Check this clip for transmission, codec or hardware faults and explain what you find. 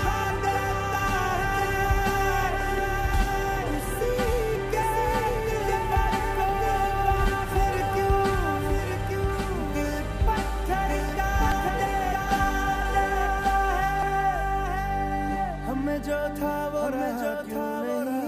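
Two faults are present: a doubled audio track running through the whole clip, and three dropped buffers (overruns).

The doubled audio track most likely comes from the signal being captured a second time through a slower path and mixed back in. The result is a full-band copy trailing about a second behind the original and roughly 5 dB quieter. It carries no decay or room colouring, so it sounds like a flat, detached repeat of everything heard a moment earlier.

Dropped buffers (overruns) occur at 4.83 s, 11.52 s and 14.03 s. At each point the software likely failed to collect incoming samples before the hardware overwrote them, so a stretch of roughly a fifth of a second is lost and the surrounding audio is spliced directly together. There is no gap of silence. Each one is heard as an abrupt forward jump in the sound.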